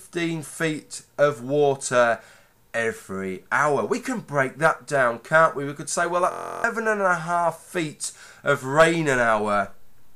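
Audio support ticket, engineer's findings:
Steady buzz at 6.32–6.64 s, pitched around 43.1 Hz, with the audio underneath frozen. System hang loop. Host or driver stalled while the output hardware kept replaying its ring buffer. A 23.22 ms segment repeats exactly, 14 times, consistent with a 1024-sample buffer. Roughly 300 ms of real audio is missing.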